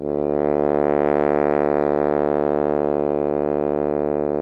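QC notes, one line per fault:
No faults detected in this music.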